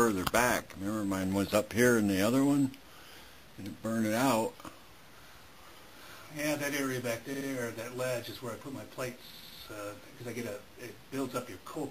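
Repeated frames at 7.33 to 7.47 s and 9.30 to 9.58 s: a 69.7 ms block replays twice, then a 92.9 ms block three times, stuttering and adding 139.3 ms and 278.6 ms.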